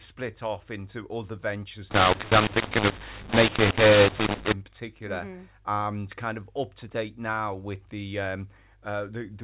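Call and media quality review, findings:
mu-law and A-law mixed up, 1.91–4.53 s, just after "off into other ventures": harsh, distorted speech, pauses filled with noise. The decoder reads A-law telephone data as mu-law. Unlike clipping, quiet gaps are lifted well above silence.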